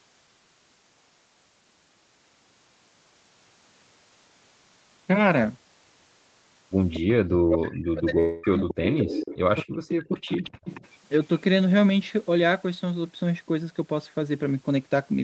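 Speech over a call path topped out around 8 kHz, with a few things going wrong from about 7 s on. You get a delayed copy of the talker at 6.93 to 7.0 s, 8.7 to 9.37 s, 10.12 to 10.18 s and 10.34 to 10.88 s, trailing by about 0.23 s and sitting roughly 10 to 20 dB under the main speech. That's likely echo leak, with a speakerphone's canceller letting some of its own pickup slip back. From 7.4 to 8.81 s and again from 9.55 to 10.45 s the talker ducks hard, dipping by something like 40 dB in places, most likely speech suppressed in double talk, as the canceller clamped down while both ends were talking. Tucked inside the first of those, from 8.19 to 8.45 s, about 240 ms of audio is gone and replaced by a smeared continuation of the previous sound, which is likely a long network dropout covered by the receiver's concealment.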